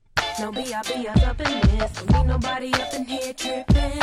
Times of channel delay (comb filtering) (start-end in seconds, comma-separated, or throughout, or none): 0.95-2.60